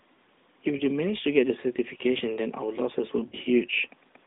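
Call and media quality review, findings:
Lost AMR speech frames, 0.78–0.85 s: brief dip and warble, consistent with one lost 20 ms frame. Decoder reuses the previous pitch and vocal-tract parameters at reduced gain. Waveform shows an amplitude notch with repeated cycles; spectrogram shows smeared, flattened harmonics.

Lost AMR speech frames, 3.28–3.35 s: longer drawn-out smear, consistent with two consecutive lost frames (40 ms). Concealment repeats the parameters while the gain falls. Waveform shows a sagging envelope, and the spectrogram shows a horizontal harmonic stretch that fades before recovery. Rest of the band is confined to 200 Hz–3.7 kHz by the AMR narrowband path.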